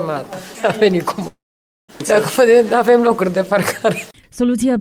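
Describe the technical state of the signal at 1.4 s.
At 1.4 s the signal is inside a long network dropout running from 1.27 to 1.90 s. The sound at that point is not the original: the tail just before 1.27 s is stretched into a fading buzz or hiss, and about 0.5 s of the gap is left silent. About 0.6 s of audio is missing outright, likely because the stream stopped arriving, and the sound resumes at 1.90 s without the lost portion.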